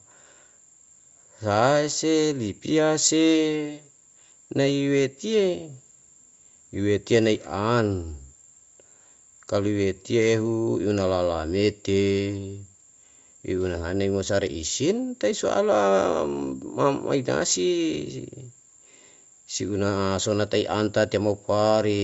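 No technical faults can be heard in this speech recording.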